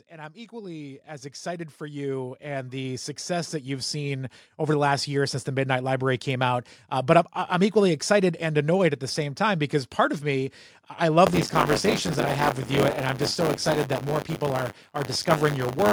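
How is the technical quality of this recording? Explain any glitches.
The technical quality is compromised by two faults: a gain ramp at the start and a persistent buffer fault near the end.

Automatic gain rising runs from 0.08 s to 4.37 s. The gain control judged the input too quiet and raised its gain by about 18 dB gradually, so the speech and the background noise swell together over those four seconds.

Buffer tearing starts at 11.26 s and continues to the end. The writing program and the reading hardware have slipped so that they cross inside each period. A small fraction of every buffer replays audio from a few tens of milliseconds earlier, with hard joins on both sides. The result is a robotic 100 Hz buzz, which fits a 10 ms buffer period, audible only while speech is present.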